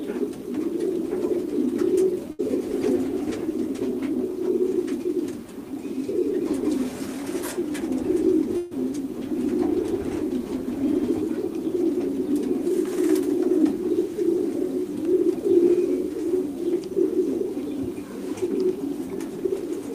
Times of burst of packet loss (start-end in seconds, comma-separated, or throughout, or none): 2.31-2.41, 8.57-8.73